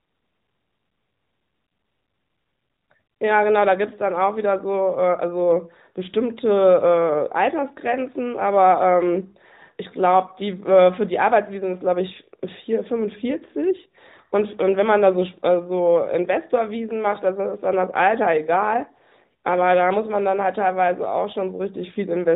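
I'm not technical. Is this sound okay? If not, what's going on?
Yes, nothing wrong can be heard in this recording.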